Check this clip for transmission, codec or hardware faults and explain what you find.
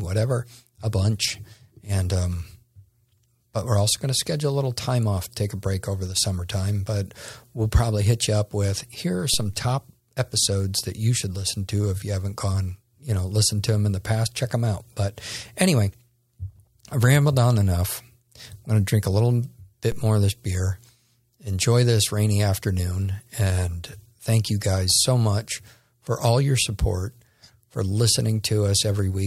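Two DC steps occur in this speech. At 9.34 s, between "up with here are" and "top episodes that you", and again at 19.92 s, between "to drink a little" and "more of this beer", the waveform's zero line suddenly shifts by about -22 dBFS. A roughly 2 Hz high-pass then lets each offset drain away. Each jump lands as a brief low thump while the speech continues unchanged.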